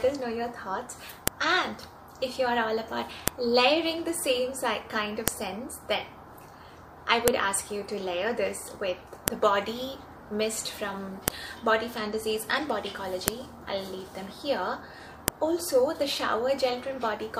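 Audio pieces about 2 s long were joined without stripping their WAV headers, so each header's bytes were played back as if they were samples. This is a file header played as audio, and it sounds like a sharp, loud click or snap at 1.28, 3.28, 5.28, 7.28, 9.28, 11.28, 13.28 and 15.28 s. Each one lands at a piece boundary, regardless of what the surrounding sound is doing.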